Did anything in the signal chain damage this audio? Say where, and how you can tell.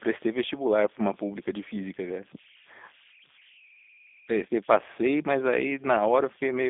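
Yes. At the converter there are converter idle tones: a tone around 2 kHz, about 27 dB below the speech, throughout. An undithered delta-sigma loop produces this, unlike hum, which sits on mains harmonics.

In the codec, G.729 damage is plainly audible. Speech is confined to 250 to 3600 Hz, nothing above 3.7 kHz, with a rough synthetic buzz that fits an 8 kbit/s stream. The buzz is what separates it from plain band-limiting.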